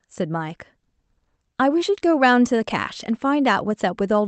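Throughout the speech there is clock drift between sender and receiver: the sender's clock runs roughly 1.5 percent slow, so the receiver's jitter buffer keeps draining instead of holding steady. Packet loss leaves gaps or smeared concealment at random moments, but drift acts in one direction for the whole clip. Here the buffer is always short of audio, which gives a faint, persistent unevenness in pacing rather than isolated breaks.

From 0.38 s to 4.17 s that shortage shows up as repeated timing corrections. To keep pace, the receiver keeps stretching or repeating short pieces of the signal, adding around 70 ms in total and leaving the stretch playing at about 98 percent speed. The edits are small, unevenly spaced and all lengthen the audio. If heard at all, they come across as slight hiccups or a wobbly tempo, not as a smooth slowdown or a single audible splice. The Opus call path at 32 kbps limits the audio to about 8 kHz of bandwidth.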